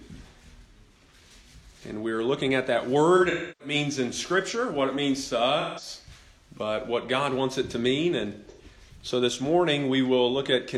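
Around 3.16 to 3.75 s there's AAC frame loss with concealment. About a third of a second of audio goes missing, with the longest gap close to 300 ms, so the decoder keeps repeating the last good spectrum with scrambled detail and the sound smears and sags before recovering. Shorter smeared, phasey patches follow at 5.60 to 5.88 s (about 170 ms lost) and 8.50 to 8.62 s (about 85 ms), which points to four and two dropped frames respectively.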